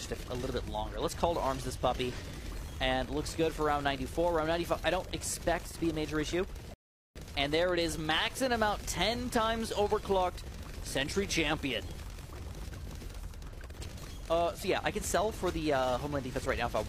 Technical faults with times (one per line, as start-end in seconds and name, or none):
6.74-7.16 rebuffering stall